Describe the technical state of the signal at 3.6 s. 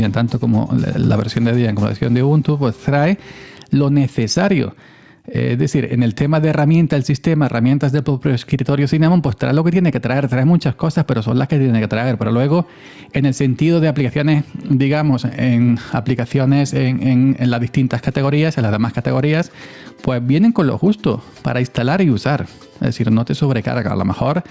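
Gain pumping is present at 3.6 s, as it is throughout the clip. The input gain is likely set far too high, so a fast limiter or compressor clamps down on each loud sound and lets go in the gaps, swinging the level by around 10 dB. The dynamics sound flattened and squeezed, all within the call processing's band, which stops at 8 kHz.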